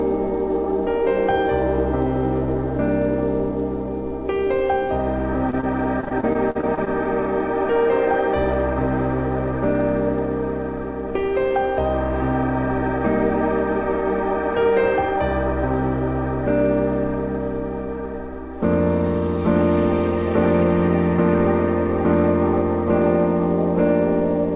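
Brief smears, each lasting only a few hundredths of a second, appear at 4.87, 5.50 and 5.61 s. The sound seems to slur or waver for an instant before settling back. These are short concealed packet losses. In each case about 20 ms of audio arrived too late or not at all, and the receiver covered the gap by extending the last sound it had, then blended back into the real signal.

From 6.01 to 6.88 s the audio turns choppy and robotic, with pieces dropping out. This is repeated packet loss: nine separate gaps, the longest about 44 ms, left roughly a fifth of that stretch to be filled in. Each patch repeats the preceding sound, and the next gap arrives before the audio recovers, so the fills join into a mechanical stutter. Throughout the clip, the narrow call path cuts everything above 4 kHz, which fits G.711 A-law.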